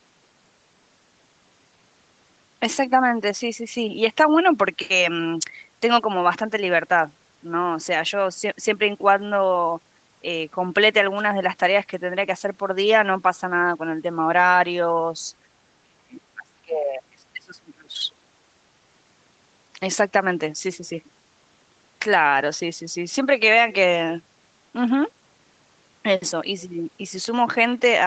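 From 15.81 to 18.02 s the speech ducks by up to roughly 35 dB, likely speech suppressed in double talk, rather than clean packet-loss gaps.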